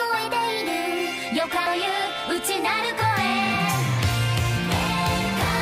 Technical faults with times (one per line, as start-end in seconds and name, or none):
1.66 CD skip